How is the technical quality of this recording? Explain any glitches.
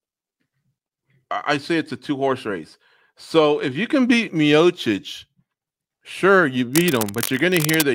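The recording has one clear glitch near the end. From 6.73 to 7.85 s, just after "sure you", a dense, uneven scratching and rustling sits over the speech, only about 10 dB below it. This is cable scratch noise, likely from a worn cable or connector being moved, its contact resistance flickering rapidly.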